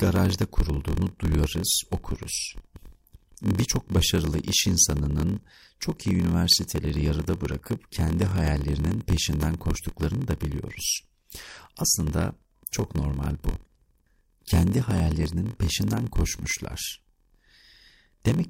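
Speech, with a block size mismatch (padded) running throughout: a steady buzz at 43.1 Hz, consistent with 1024-sample reads at 44.1 kHz, each block ending in a short zero-filled gap. The speech plays at 0.938 times normal speed with pitch essentially unchanged.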